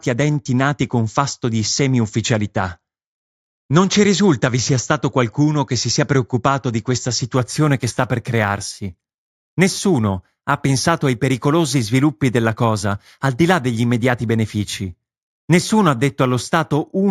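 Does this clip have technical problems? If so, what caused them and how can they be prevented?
Yes. From 7.37 s, right after "sia preoccupato di questa", to the end, there is imaging from linear upsampling. The top of the band dulls, and a faint metallic shimmer sits on sibilants. That shimmer is a mirrored copy of the spectrum in the 8 to 16 kHz range, roughly 25 dB down. This fits straight-line interpolation from a 16 kHz rate up to 48 kHz. Aliasing folds content downward into the audible band, but these images sit above the original band. Using a proper windowed-sinc or polyphase resampler with a steep low-pass filter would prevent it.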